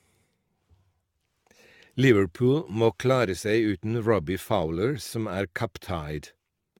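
From start to finish the speech carries generation loss: it sounds swirly and hollow, with consonant attacks smeared and a watery shimmer beyond what a single moderate-rate encode would leave. The likely cause is repeated lossy re-encoding, around seven passes, consistent with AAC-LC near 96 kbit/s, each pass requantising on a shifted frame grid so errors accumulate. A spectrogram shows nothing above 17 kHz, patchy holes in the upper bands and blurred onset edges in the waveform.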